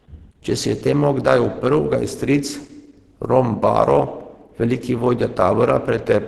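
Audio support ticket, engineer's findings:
Speech muffled and hoarse throughout, top end band-limited, plainly audible damage. Likely Opus compression in hybrid mode: speech layer codes lows, upper band starved and noise-filled. Super-wideband output at a rate consistent with about 16 kbps.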